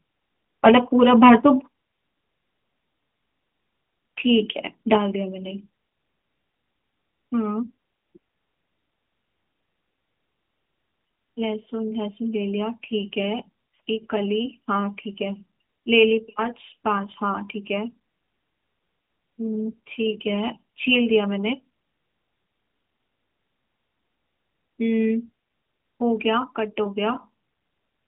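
From 0.65 to 0.77 s the loudest peaks turn harsh and crackly, likely microphone overload driving about 5 dB past the converter's limit. The distortion rides only the tallest peaks, unlike the steady dulling of the narrowband phone line.

At 0.69 s, inside that distorted burst, voice and background drop together by 3 dB, a microphone volume stepped down. It is one abrupt step rather than a gradual fade, likely the software cutting input gain after the overload.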